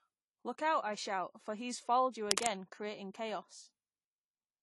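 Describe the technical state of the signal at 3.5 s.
At 3.5 s the speech carries plainly audible codec damage, present throughout the clip. Nothing sounds above 11.5 kHz, so it is dull and smeared. The likely cause is AAC compression at a low rate, fitting AAC-LC near 32 kbps. Its quantisation drops the upper band and thins the spectrum.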